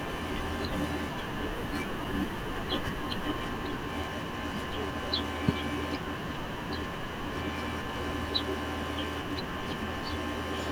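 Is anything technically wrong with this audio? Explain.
Yes. Periodic USB or driver dropouts occur every 2.0 s from 0.06 s to 6.03 s, about four in all. Something blocks the audio path at that fixed interval, and each time a few milliseconds of speech are replaced by silence, heard as evenly spaced ticks.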